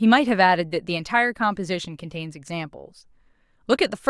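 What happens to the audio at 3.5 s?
At 3.5 s the speech carries on cleanly, with no dropout, click, distortion or other fault at that moment.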